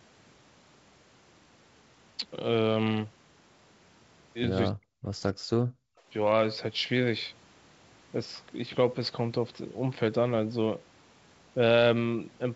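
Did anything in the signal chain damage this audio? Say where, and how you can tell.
Yes, in the call processing. The speech drops by roughly 40 dB at 4.71–4.9 s and 5.3–5.58 s, likely speech suppressed in double talk as the canceller ducked both sides.

At 5.86–6.07 s the room tone itself falls about 40 dB, then returns. That's background gated by the echo canceller, clamping the mic while the loudspeaker played.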